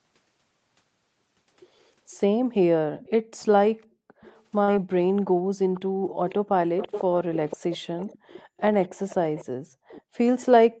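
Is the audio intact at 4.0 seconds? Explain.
No. From 3.96 to 4.11 s the echo canceller gated the background, pulling the room sound down about 40 dB while the loudspeaker played, then releasing it, so the room sound briefly drops out and then returns.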